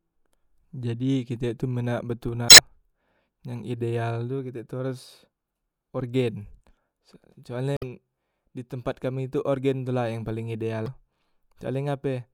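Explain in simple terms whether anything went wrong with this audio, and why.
Three short glitches in this speech come from damaged data in a compressed stream, at 2.46–2.60 s, 7.74–7.83 s and 10.84–10.88 s. Corrupted bytes made the decoder misread those frames until it regained sync at the next valid frame.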